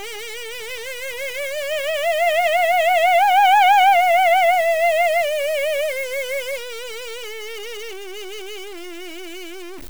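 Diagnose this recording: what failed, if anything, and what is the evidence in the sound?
A stuck bit throughout the music, likely at the converter: harsh buzz, waveform samples offset by a fixed step of about -30 dBFS, and broadband spectrogram haze.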